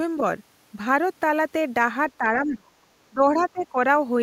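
From 2.18 to 2.73 s the speech drops by roughly 35 dB, with shallower dips at 3.10–3.22 s and 3.43–3.77 s. This is speech suppressed in double talk, likely from an echo canceller muting both talkers at once. Between 3.38 and 3.62 s, a faint second voice about 20 dB below the speech comes through: the other side's voice leaking through, likely as uncancelled loudspeaker echo.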